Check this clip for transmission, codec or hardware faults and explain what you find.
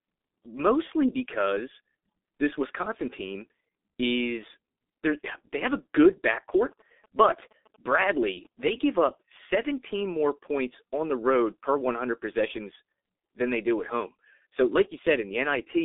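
Two faults here: codec damage across the whole clip, and a burst of phone interference in the middle.

The G.723.1 codec damage runs start to finish and it's heavy. The line band sits at roughly 250 Hz to 3.6 kHz, with nothing at all above 3.7 kHz, so the speech comes out muffled. The codec works in 30 ms frames and rebuilds the voice from a slowly updated model, which is why it sounds hoarse and the consonants smear together. The coarseness fits the 6.3 kbit/s mode.

From 6.10 to 8.70 s, right after "is they have a" and ending before "give up", there are GSM signalling bursts. A nearby 2G phone was sending short bursts of radio traffic while signalling, and some audio stage rectified them into sound. You hear a galloping dit-dit-dit of short 217 Hz buzzes. It's quiet, well below the speech.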